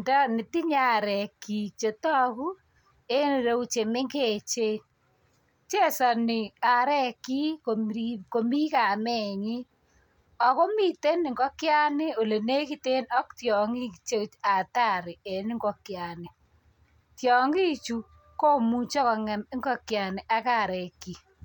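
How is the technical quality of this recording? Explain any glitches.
No glitches or technical faults are audible anywhere in the recording.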